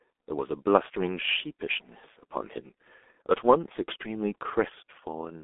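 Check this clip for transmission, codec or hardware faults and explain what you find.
One fault runs through the whole clip: G.723.1 codec coding, from start to end. This early internet-telephony codec squeezes speech into 30 ms frames and rebuilds it from a simple vocal model refreshed only once per frame, and the heavy damage here fits a rate around 6 kbit/s. The line band sits at roughly 250 Hz to 3.5 kHz, with nothing above 3.7 kHz, so the speech sounds muffled, thin and hoarse, and consonants smear into one another.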